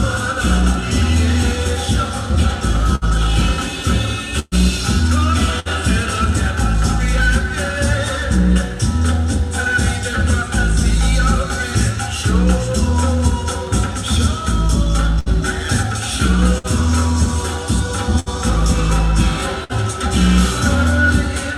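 Bursts of packet loss at 2.95, 4.39, 5.60, 15.19, 16.58, 18.20 and 19.64 s each remove about 60 ms (120 ms at 4.39 s), filled by a fading continuation of the preceding sound rather than silence, before resuming further on.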